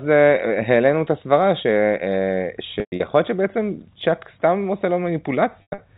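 Packet loss with pitch repetition hits at 2.80 to 3.00 s and again at 5.62 to 5.78 s. About 160 ms of audio goes missing across the first 200 ms stretch, with a longest gap of 120 ms, and about 140 ms across the second, with a longest gap of 100 ms. That pattern fits 20 ms packets. The receiver loops the last pitch cycle to fill each gap, so the sound holds briefly with a buzzy, frozen tone, then fades toward silence before cross-fading back. The narrowband G.711 telephone coding is audible underneath throughout.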